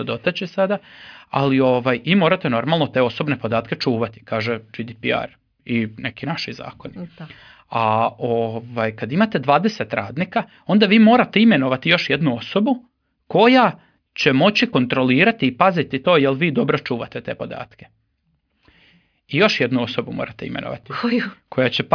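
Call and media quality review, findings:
No findings in this call and media quality review: nothing to log.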